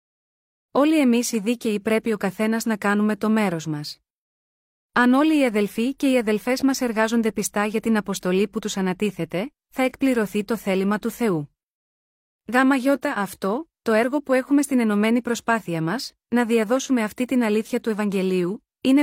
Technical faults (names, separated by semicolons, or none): none